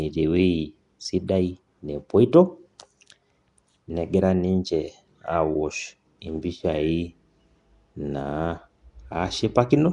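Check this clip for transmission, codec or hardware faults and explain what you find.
One codec fault is present across the whole recording. From start to finish the speech carries a rough, hissy halo and a smeared, underwater quality, with nothing above 10.7 kHz. The likely cause is Nellymoser compression, coding short blocks at a fixed two bits per sample and filling starved weak bands with noise, at a rate that fits roughly 44 kbps.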